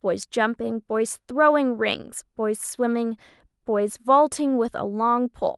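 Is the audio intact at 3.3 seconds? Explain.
Yes, the speech at 3.3 seconds is intact, with no dropout, click, distortion or other fault at that moment.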